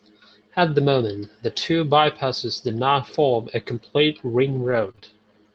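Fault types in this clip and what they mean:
Lost packet rebuilt from error correction: At 2.67 s, just after "moment the two bypasses", about 20 ms of audio is briefly rougher and noisier, which points to one lost packet replaced by the low-bitrate copy carried in the next Opus packet, so no gap is heard.
Repeated packet loss (robotic sound): From 4.47 s to 5.04 s, after "not form a complete", three short dropouts, the longest 22 ms, are patched by extending the preceding sound. This gives a choppy texture, with roughly 200 ms affected by the repair.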